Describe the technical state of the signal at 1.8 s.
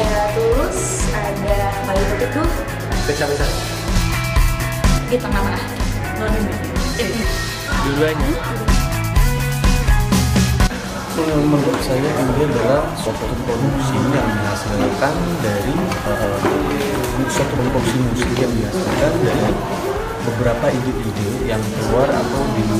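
At 1.8 s the signal is intact, with no dropout, distortion, glitch or other audible fault at that point.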